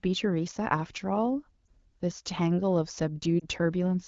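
Lost AMR speech frames occur twice in this speech, at 1.66 s and from 3.40 to 3.45 s. Each time, a frame arrived damaged and failed its checksum, so the wideband decoder, running cleanly at 12.65 kbit/s, filled the gap by repeating the previous pitch and vocal tract settings at lowered gain. Each gap is about 20 ms, which fits a single lost frame, and is heard as a brief dip or warble before the sound returns weak for a moment.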